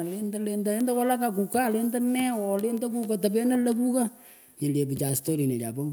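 Sharp, isolated ticks cut through the speech at 0.81 s (about -12 dBFS), 2.78 s, and 5.09 s just after "nyil yeh" (both about -18 dBFS). These are bit error spikes: a flipped bit briefly throws one sample's value off by a power of two, producing a broadband click unrelated to the speech.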